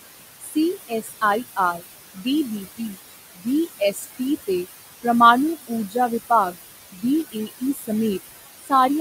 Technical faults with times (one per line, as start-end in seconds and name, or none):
0.00-9.00 noise suppressor artifacts
0.40-5.05 speech cut by the noise suppressor
5.67-5.96 speech cut by the noise suppressor
6.52-7.90 speech cut by the noise suppressor
8.59-8.72 speech cut by the noise suppressor